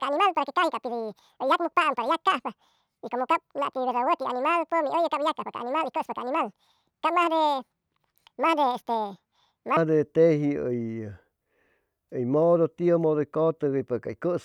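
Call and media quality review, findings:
Section at the wrong speed, 0.0 to 9.77 s. Speech plays 1.92 times too fast, pitch raised about ten semitones, hurried and chipmunk-like. Likely a player or resampler running this stretch against the wrong clock, so speed and pitch rise together.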